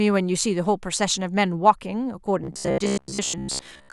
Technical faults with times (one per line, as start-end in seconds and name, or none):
2.44-3.93 robotic sound from repeated short buffers